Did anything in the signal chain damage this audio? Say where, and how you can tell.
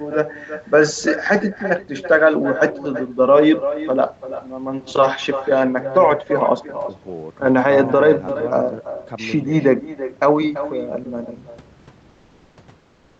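Yes. With no echo canceller at the far end, its loudspeaker leaks into its microphone, so the talker's voice returns about 11 dB quieter, roughly 300 ms later, throughout.

The codec likely stopped transmitting during pauses, so comfort noise replaces the background at 12.09–12.57 s and 12.79–13.20 s: smoother noise, about 2 to 3 dB quieter.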